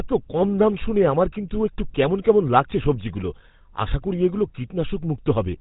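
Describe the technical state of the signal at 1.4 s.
At 1.4 s the speech carries GSM full-rate codec damage, present throughout: pulse-excited vocal-tract modelling, fitting a 13 kbps stream, leaves clearly audible buzzy roughness and nothing above 4 kHz.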